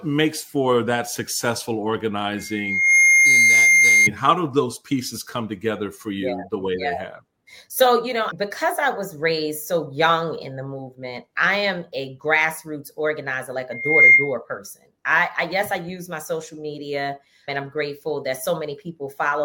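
A piercing 2.1 kHz tone swells up over about half a second at 2.37 s and holds until 4.10 s, then returns faster and louder, about 15 dB above the sound, from 13.71 to 14.35 s. This loudspeaker feedback squeal arises when the microphone re-amplifies its own speaker output until that frequency runs away.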